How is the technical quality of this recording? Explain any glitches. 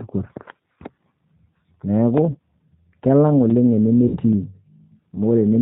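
The recording has plainly audible low-bitrate codec damage throughout, plus two brief dropouts.

G.729 codec, throughout: the speech is rebuilt from a vocal tract filter, a pitch predictor and a few pulses per 10 ms frame, which fits 8 kbit/s G.729A. Nothing above 4 kHz survives, so the voice sounds muffled, slightly rough and synthetic.

VoIP packet loss concealed by the speech codec, at 2.31–2.36 s and 4.08–4.18 s: audio went missing, about 30 ms then 60 ms, which points to one and then two lost packets. The decoder extended its last pitch and filter at falling gain, producing a short buzzy or noisy, fading smear, with weak speech just afterward.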